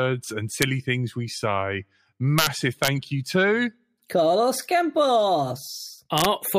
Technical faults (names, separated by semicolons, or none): integer overflow